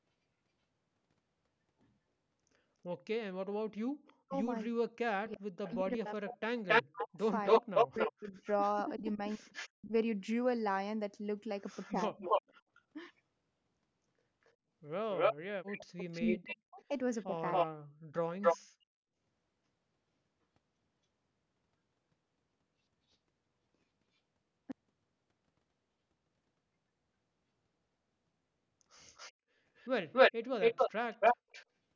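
From 4.07 to 9.69 s a second copy of the speech trails the original by 275 ms, roughly as loud as the talker or a little louder. This is an echo leak, likely from a far-end loudspeaker whose echo canceller let the pickup through and sent it back. Over nearly the same span, 4.22 to 9.92 s, the talker's own speech dips and breaks up in pieces, falling by around 40 dB at its deepest and for about three seconds in total. That is speech suppressed in double talk: likely the canceller could not separate the talker from the returning echo while both overlapped, so it turned both down.

The same pair returns briefly from 11.82 to 12.82 s. Here the 275 ms echo sits at about the same level as the speech, and the talker is pushed down by around 30 dB for under half a second between 11.92 and 12.5 s.

From 14.44 to 18.58 s the echo leak comes back at full strength. Between 16.17 and 18.22 s the speech is again suppressed, by about 40 dB at worst and for roughly one second in total.

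From 18.61 to 18.95 s the room sound itself drops away by about 40 dB, then returns. This is background gated by the echo canceller, which clamped the microphone hard while the loudspeaker played and let go afterwards.

The echo leak returns a last time from 29.1 to 31.66 s, again trailing by 275 ms. Throughout, nothing is heard above 8 kHz, consistent with the normal call microphone processing.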